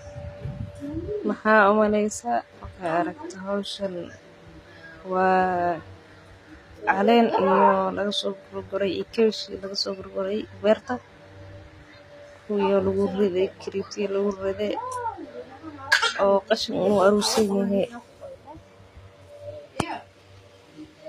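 All the way through, the speech has the gritty, metallic top end of likely HE-AAC compression, which fits a low bitrate around 24 kbps. The treble is rebuilt from lower bands rather than coded, so s sounds go lispy and nothing reaches above 14.9 kHz.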